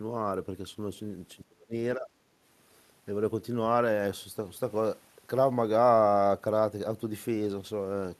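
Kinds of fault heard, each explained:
Speech suppressed in double talk: the speech level drops sharply in two short stretches, by around 35 dB from 1.36 to 1.74 s and by a shallower 15 dB or so from 1.96 to 2.11 s. This is likely an echo canceller pulling down the near talker while the far side was also speaking. On a waveform the envelope pinches in; on a spectrogram those spans turn visibly fainter.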